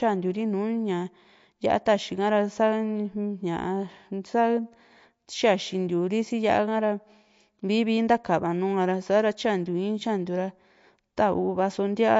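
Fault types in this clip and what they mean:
MP3 compression: The speech has no content above about 7.6 kHz, leaving s sounds dull, and quieter spectral detail flickers in and out so the voice sounds watery and swirly, with smeared consonant onsets. This is likely low-bitrate MP3 encoding, with damage at a level that fits about 48 kbps. On a spectrogram the top stops at a flat ceiling near 7.6 kHz, with patchy, blocky holes in the weaker bands below it.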